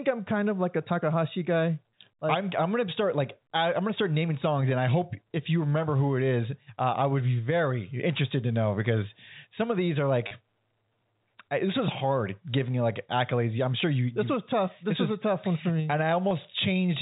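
At 10.28 s, just after "some of these are", about 30 ms of audio is lost. The receiver fills the gap by repeating its last packet, a case of packet loss with last packet repeated. The same thing happens for 20 ms at 16.29 s, after "tough one for me." Both gaps fit 10 ms packets. Each repeat is heard as a brief robotic stutter over the band-limited G.711 telephone sound.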